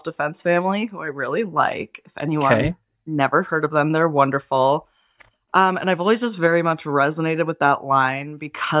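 No technical faults can be heard anywhere in the speech, and the signal stays steady and intact throughout.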